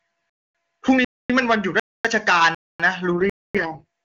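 Gaps between chunks at 0.30, 1.05, 1.80 and 2.55 s: after every half-second of speech, 250 ms of silence is inserted, cutting the sound with holes at a steady rhythm. An AMR rate drop from 3.12 s to the end turns the clear wideband speech rough and synthetic. This fits the network forcing the codec down to its lowest rate, around 6.6 kbit/s, with no loss of bandwidth. A final 250 ms chunk gap at 3.30 s falls inside that degraded stretch.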